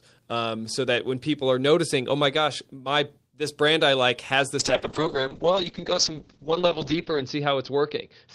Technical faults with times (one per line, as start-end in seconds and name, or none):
4.61-8.35 call bitrate drop